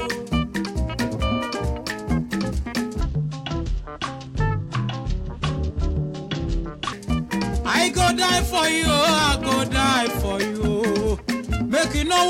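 It's a stretch of audio with a section at the wrong speed: from 3.0 to 6.93 s everything plays at 0.626 times normal speed, so it drags and drops about seven semitones in pitch at once. That's likely an edit or player running it against the wrong clock.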